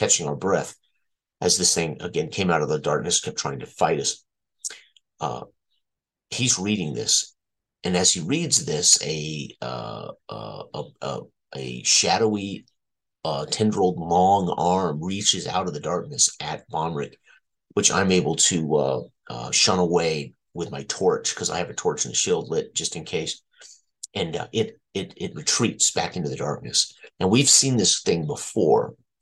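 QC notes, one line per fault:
No faults to note.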